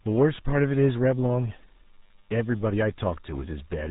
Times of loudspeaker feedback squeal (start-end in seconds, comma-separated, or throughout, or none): none